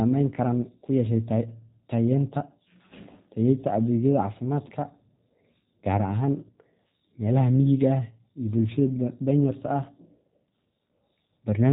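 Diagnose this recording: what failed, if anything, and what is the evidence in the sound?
The codec stage is at fault: the speech went through the G.729 codec throughout. Everything above about 3.8 kHz is missing, and the speech sounds plainly rough and synthetic because it is rebuilt from a vocal tract model, pitch prediction and sparse pulses, which fits an 8 kbit/s link.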